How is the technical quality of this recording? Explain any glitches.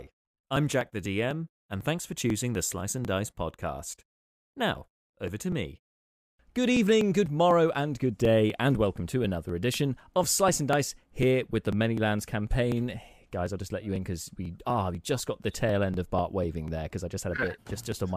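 The recording is marred by one steady, repeating fault that runs almost its whole length.

From about 0.07 s to 17.92 s there are periodic USB or driver dropouts, one every 0.248 s, around seventy in all. Each time, something blocks the USB bus or audio driver and roughly 2 ms of audio is skipped outright, so the waveform jumps straight to later material. The splice is heard as a regular tick during the speech. A spectrogram shows thin, evenly spaced vertical broadband lines, and the waveform shows small step discontinuities rather than silent gaps.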